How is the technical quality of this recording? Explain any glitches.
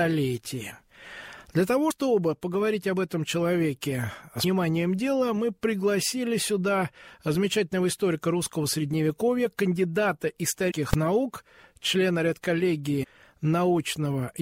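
The recording has two kinds of glitch: four places where compressed frames are skipped, and one full-scale pop from invalid numbers.

Compressed frames skipped at 1.9 s, 4.43 s, 10.70–10.72 s and 13.03–13.05 s. Whole blocks of encoded audio were lost or rejected by the decoder. Playback jumps forward by a multiple of a roughly 26 ms frame, which fits a 1152-sample frame at 44.1 kHz. The jumps are about three, seven, fifteen and five frames, losing roughly 70, 200, 300 and 150 ms. The overlap between neighbouring frames blurs each join into a short smeared blip rather than a click. A waveform shows a sudden change in envelope with no gap. A spectrogram shows a discontinuity in the spectral content at each point.

Invalid numbers at full scale at 10.93 s. A calculation produced infinite or undefined values that were clamped to the maximum level for a block of about 2.9 ms, which fits a 128-sample block. 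The block is so short that it is heard as a single loud bang. The waveform shows a narrow slab held flat at one extreme value, far beyond the surrounding peaks. The spectrogram shows a thin vertical stripe of energy across all frequencies.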